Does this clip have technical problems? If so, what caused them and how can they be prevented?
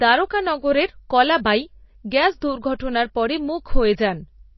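Yes, the whole clip has that watery, swirly quality you get from MP3 compression, most likely a low-bitrate encode, with the damage plainly audible on this speech. Everything above about 5.8 kHz is simply gone, so the encoder was clearly starved of bits. It chopped off the treble and kept dropping weak frequency lines in and out between frames. The dull top end and the warbly texture fit something around 24 kbps. To prevent it, keep a lossless master and encode at a much higher bitrate.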